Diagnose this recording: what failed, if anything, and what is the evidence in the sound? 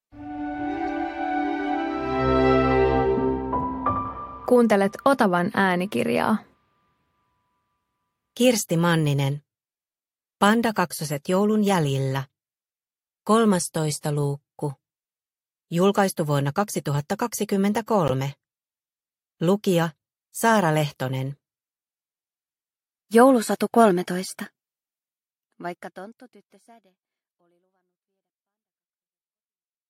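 Codec stage: a corrupt frame was decoded twice. There is a faint blip at 0.88 s, then a much louder burst from 18.08 to 18.11 s spanning a few frames. Flipped bits made the decoder misread gains and codes, putting energy at wrong frequencies for each damaged frame.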